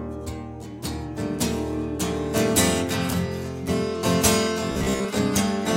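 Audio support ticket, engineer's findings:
Robotic sound from repeated short buffers, 4.72–5.06 s. Audio likely arriving too seldom, so the last ~15 ms of audio is replayed in place of skipped material for most of the span. The loop imposes a fixed 66.7 Hz metallic buzz over the sound.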